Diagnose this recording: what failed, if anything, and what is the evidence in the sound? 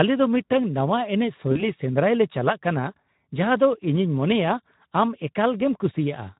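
Throughout the clip the speech sounds hoarse and grainy, with a thin, noise-like top end instead of crisp consonants. That points to the codec stage: Speex compression at a low setting, which fits a bitrate around 11 kbps. Too few bits go to the excitation signal, so the fine structure of the voice is replaced by a coarse approximation, and the upper band is only a shaped noise fill.

From 1.51 s to 1.72 s the speech smears and sags in level and stays weak and distorted before normal sound recovers. This is VoIP packet loss concealed by the speech codec, a network-stage fault. About 40 ms of audio was missing, which fits two lost 20 ms frames. The decoder filled the gap by repeating its last pitch and filter settings at falling gain, and because each frame builds on the previous one, the damage outlasts the gap itself.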